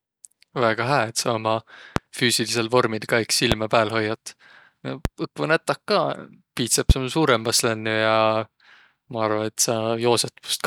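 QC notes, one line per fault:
1.96–2.00 s, 3.52–3.55 s, 5.05–5.08 s, 6.90–6.93 s: loud pop. Each is a single sharp pop lasting about 30 ms, standing well above the speech, which continues unbroken underneath. The third is slightly softer. On the waveform each shows as a tall, narrow spike, and on the spectrogram as a thin vertical stripe spanning the whole frequency range. The likely cause is a voltage pulse from a switch, plug, static or driver glitch entering the signal path.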